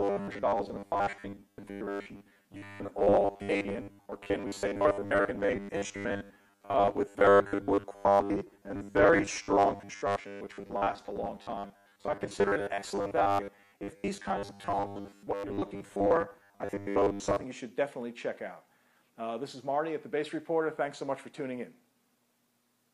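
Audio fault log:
0.01–17.44 s, robotic sound from repeated short buffers: a rigid metallic buzz fixed at 100 Hz loosely follows the sound. Fresh audio likely arrives too seldom, so 10 ms fragments are looped across most of the span while real material is skipped.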